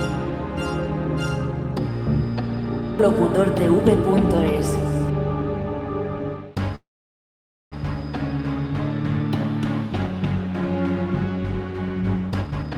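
At 6.75 s, packets were likely held up in transit, leaving the jitter buffer empty: a call audio freeze. The receiver stretches the last sound into a brief fading buzz or hiss, then about 0.88 s of silence, so the gap runs to 7.74 s, close to a full second. When the audio resumes, it picks up exactly where it stopped, with nothing lost, only delayed by that second.

From 12.41 s to the end, the jitter buffer was holding more audio than its target, so the receiver trimmed short pitch-period pieces back to back to shed about a third of a second of delay: a jitter buffer speed-up. Playback runs at about 173% of normal speed with the pitch unchanged, so this final stretch sounds noticeably rushed.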